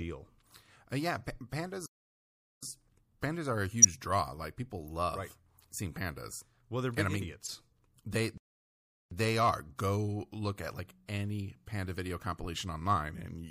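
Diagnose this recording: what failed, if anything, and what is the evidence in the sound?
Codec stage: the speech has a watery, swirly texture throughout, with metallic chirps on sibilants. That is MP3 compression, likely at a low bitrate around 64 kbps, with the encoder zeroing weak frequency lines. It is steady across the clip, unlike the isolated frame damage.

Playback stage: the sound drops to silence from 1.86 to 2.63 s and again from 8.38 to 9.11 s, about 0.77 s and 0.74 s. These are playback stalls, likely where the player ran out of data. Clean silence with no garbled energy separates them from decoder errors.

Decode stage: brief chirp-like bursts at 3.82–3.85 s (loud) and 7.44–7.49 s (much quieter) are corrupt frames decoded. A couple of frames each time had flipped bits that were played anyway, putting energy at the wrong frequencies. That is wrong sound rather than a gap, which rules out a stall.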